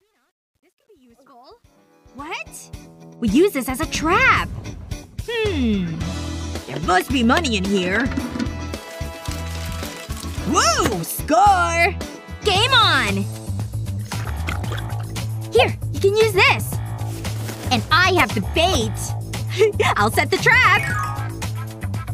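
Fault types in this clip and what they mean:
Truncation distortion on a fade: the fade-in ending at 3.16 s is quantised without dither, which fits an 11-bit word length. From 0 to 1.93 s the quiet start turns gritty. Unlike steady hiss, the grit follows the sound and clears as level rises.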